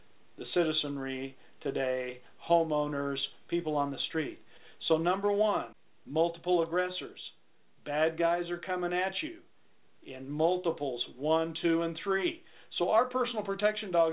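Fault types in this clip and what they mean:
No faults can be heard anywhere in the clip. The audio comes through a call path whose codec holds it to a narrow telephone band with nothing above 4 kHz, which fits G.711 mu-law at 64 kbps.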